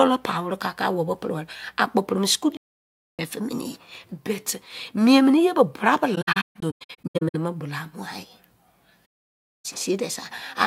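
The speech drops into silence three times from AAC frame loss with muting. The first is a solid gap from 2.56 to 3.19 s. From 6.15 to 7.35 s, about 0.73 s in total goes missing in scattered holes, the longest around 150 ms. The last gap runs from 9.05 to 9.66 s. Missing frames were decoded as zeroed spectra, and the overlapping windows taper the sound down and back up. The waveform goes nearly flat, and the spectrogram shows full-band blank columns with soft edges.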